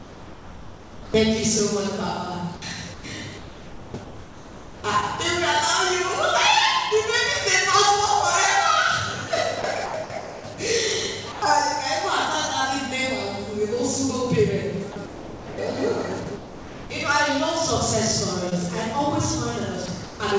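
From 0.00 to 1.14 s the sound is dropped by the voice detector, most likely because the sender classed the opening as background and stopped transmitting. About 0.63 s of real sound is lost under steady comfort noise. A spectrogram shows structured energy giving way to a flat, even wash, and the waveform sits as a low, uniform band until the sound returns.

Between 2.56 and 4.84 s the sound is chopped by the voice detector, likely because transmission switched on and off several times. About 1.52 s of that stretch is filled with comfort noise. It sounds choppy. The spectrogram alternates detailed blocks with smooth noise, and the waveform shows abrupt level changes at each switch. The same chopping occurs from 9.62 to 10.58 s.

At 11.32 to 11.42 s a brief 0.1 s dropout of the same dropped kind appears as a short flat patch.

Further chopped stretches follow at 14.92 to 15.58, 16.24 to 16.90 and 19.86 to 20.20 s. 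Throughout the clip, nothing appears above 8 kHz, which fits a wideband call codec.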